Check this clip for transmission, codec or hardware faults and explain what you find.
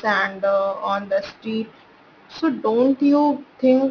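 One fault runs through the whole clip: aliasing. The audio was taken down to a lower sample rate without an anti-aliasing filter, which points to a drop from 48 kHz to about 11 kHz. Everything above the 5.5 kHz fold point was mirrored back down into the band as false, unrelated tones, sitting roughly 25 dB below the speech. Sibilants come out gritty and metallic, and the top of the spectrum stays crowded right up to 5.5 kHz instead of rolling off.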